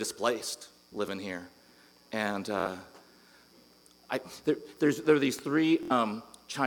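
At 0.58 to 0.62 s, 2.60 to 2.67 s and 5.83 to 5.92 s there is Bluetooth stutter. Late packets made the receiver repeat its last slice, giving a repeat over about 23, 46 and 70 ms. That fits one, two and three lost frames. Between 5.39 and 5.41 s a single loud pop sits about 5 dB above the sound. A likely voltage step caused it.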